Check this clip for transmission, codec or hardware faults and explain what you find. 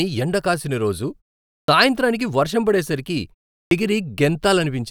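The speech has a clipped start after a pause, twice. At 1.56 s, after "ఎండ కాసిన రోజు" and a 0.43 s pause, about 122 ms is swallowed before "సాయంత్రానికి వర్షం పడే సరికి". At 3.58 s, after that phrase and a 0.32 s pause, about 132 ms goes. The output device sleeps during silence and needs time to wake, so the words start abruptly without their first sounds. On the waveform, the envelope jumps from flat to full level with no onset. The spectrogram shows the energy of the opening sounds missing.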